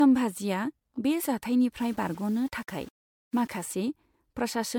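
Throughout the speech, the sound is swirly, smeared and hollow, with blurred consonant onsets. This is likely generation loss from repeated lossy coding, consistent with about four passes through MP3 at around 96 kbit/s. A spectrogram shows flickering holes and patchy texture below a ceiling near 20.1 kHz.

From 1.80 to 3.63 s, a grainy distortion rides on the speech and shifts with it, roughly 30 dB below the signal. This is low bit depth without dither, most likely rounding to about 7 bits. The waveform shows visible stair-steps.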